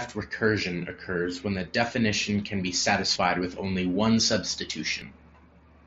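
At 5.02 s the speech jumps forward, losing roughly a twentieth of a second of sound. This is most likely a dropped buffer (overrun): the capture software fell behind, the hardware overwrote a block of samples, and the audio on either side was spliced together with no gap. A waveform shows an abrupt discontinuity at the join rather than silence, and a spectrogram shows a thin vertical broadband line there, with the speech pattern shifting on each side. The speech is carried through an mSBC Bluetooth headset link, which limits it to 8 kHz.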